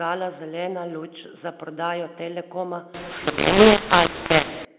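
From 2.94 to 4.65 s the speech turns harsh and grainy, loud and soft parts come out scrambled, and pauses fill with hiss. This is mu-law and A-law mixed up: telephone audio coded as A-law is being decoded as mu-law, distorting every sample's level.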